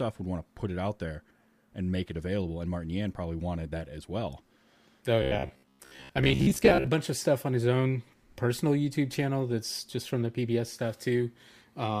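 Robotic sound from repeated short buffers runs from 5.22 to 6.87 s, ending just before "bunch of stuff on". The speech turns into a stiff, metallic buzz at a fixed 66.7 Hz that still loosely tracks the words. The likely cause is audio arriving too slowly, so the playback keeps looping the most recent fragment, which fits a buffer of about 15 ms. Roughly half the material is repeated rather than new, and the skipped audio never returns.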